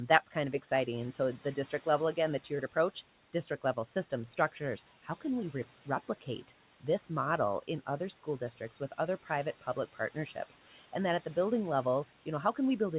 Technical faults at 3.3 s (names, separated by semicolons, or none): none